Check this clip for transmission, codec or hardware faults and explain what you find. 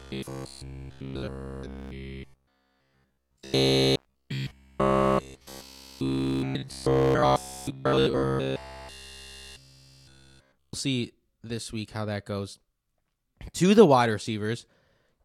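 One fault is present: robotic sound from repeated short buffers, running from 0.02 s to 10.73 s. Across that span the speech becomes a rigid, metallic buzz locked at about 66.7 Hz, still loosely tracing the words. That pitch corresponds to a repeat period of roughly 15 ms. The likely cause is new audio arriving too rarely, so playback fills the gaps by looping the last 15 ms fragment almost continuously while the real signal is skipped.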